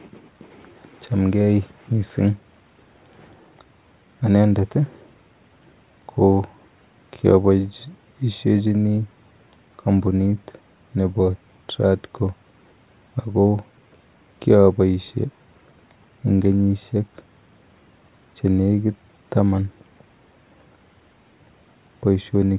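Nothing here goes wrong on the technical side, so there's no fault to point to anywhere in this bit of speech.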